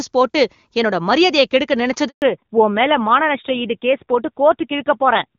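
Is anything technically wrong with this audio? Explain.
Yes, there are two faults.

A handover gap runs from 2.08 to 2.22 s, 140 ms long. No speech frames arrived while the call switched links, so the sound fades within a few tens of milliseconds and then drops out completely. On a waveform this is a flat line, and on a spectrogram it is a blank vertical band.

A fallback to narrowband follows at 2.22 s and lasts to the end. Before it, the HD Voice wideband path is clean and sounds consistent with a high AMR-WB rate. After it, the call is on an older narrowband codec, likely AMR-NB at a low rate, and nothing above 4 kHz remains. The speech turns duller and rougher. On a spectrogram, the upper energy stops at a sharp horizontal edge at 4 kHz from that point on.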